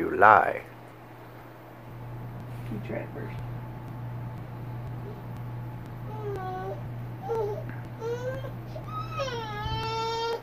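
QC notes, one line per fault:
0.42 to 10.33 s, periodic USB or driver dropouts: about twenty ticks at a steady 0.50 s spacing, each a few milliseconds of audio skipped outright. A background task stalling the USB bus or audio driver on a fixed schedule causes these brief, regular losses.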